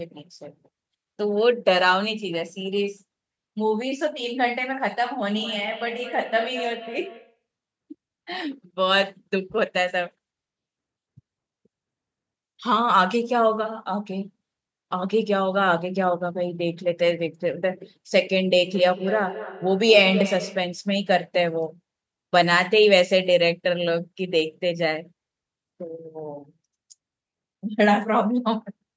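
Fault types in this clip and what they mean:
Feedback echo between two devices: a second device in the room plays the call aloud, the first microphone picks that up, and its echo canceller ignores it, removing only its own playback. From 5.3 to 7.42 s and 18.62 to 20.83 s the sound returns at a steady spacing of about a fifth of a second, peaking about 15 dB, then about 10 dB, below the speech. Unlike reverberation's smooth tail, these are distinct, evenly spaced returns.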